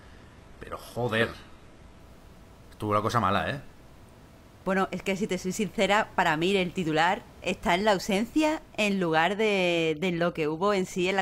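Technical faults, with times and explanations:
0.0 to 2.0 s: adaptive stream starting at a low bitrate. The opening is dull and smeared, with synthetic-sounding treble that points to a very low-rate HE-AAC version. Once the player has measured the connection it switches, with no gap, to a clearer stream consistent with around 96 kbit/s AAC, extending to about 12.3 kHz.
9.22 to 11.2 s: overdone noise removal. The room noise, sitting about 25 dB below the speech, is suddenly pushed down and breaks up into twinkling specks. The reducer is cutting individual frequency bands close to its noise estimate, taking quiet parts of the speech with them.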